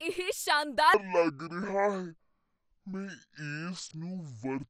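Generation loss runs through the whole clip. The sound is swirly, smeared and hollow, and attacks blur. This likely comes from repeated lossy passes, around three, and the texture points to MP2 at about 96 kbit/s.

From 0.94 s to the end, a section plays at the wrong speed. It runs at 0.559 times its recorded rate. Pitch drops by roughly ten semitones, so the speech turns deep and dragging. A clock mismatch in editing or playback is the likely cause.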